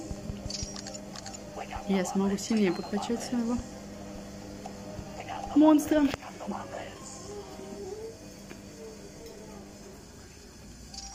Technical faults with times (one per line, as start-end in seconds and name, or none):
none